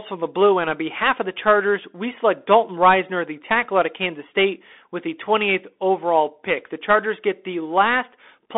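From start to finish the speech sounds boxed-in and thin, with a granular hiss beneath it, scratchy s sounds, and rough distortion on loud, bright passages. Nothing is heard above about 3.8 kHz, and the line band runs from roughly 250 Hz to 3.6 kHz. This is the Bluetooth CVSD headset codec, which fits a 64 kbps link. It sends one up-or-down bit per sample with an adapting step size, and fast, loud changes outrun that step.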